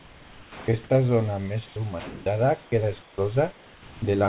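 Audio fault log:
0.0–0.68, 1.66–1.76, 2.64–2.72, 3.02–3.18 and 3.52–4.02 s: comfort noise in place of the background. Pauses become steady, featureless hiss, mostly about 4 to 7 dB quieter, the last about 1 dB louder. The sender likely stopped transmitting during silence.
2.0–2.26 s: sound dropped by the voice detector. About 130 ms of speech vanishes into steady noise. The detector likely mistook quiet speech for background and stopped sending.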